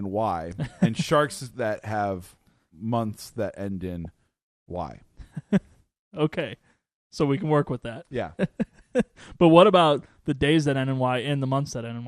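Speech heard through a dull, gurgling haze throughout, most likely MP2 compression: upper sub-bands drop out and flicker while the remaining ones sound coarse and granular, which fits a rate around 80 kbps. Unlike a transmission fault, this smearing is steady rather than bursty. At 4.05 s, right after "have months that end", there is a brief burst of DAB burbling. Bit errors slipped past error correction and put short blips of noise into single sub-bands. It is a sudden isolated event, not the constant dullness of the codec.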